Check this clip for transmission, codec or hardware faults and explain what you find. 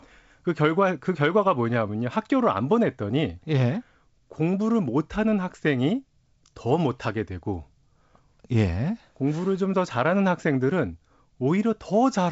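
No transmission, codec or hardware faults turn up in this speech, which carries the light coding character of G.722 wideband telephone coding, consistent with its 56 kbit/s mode, with content reaching up to 7.7 kHz and nothing above that.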